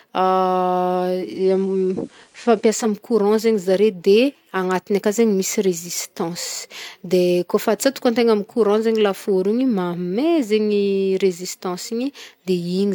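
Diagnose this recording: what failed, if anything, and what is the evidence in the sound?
Digital radio blending to analogue happened at the receiver's reception stage, from 1.08 to 2.99 s. After a 380 ms cross-fade to FM, faint hiss rises and level shifts about 1 dB. The spectrogram shows a raised noise floor.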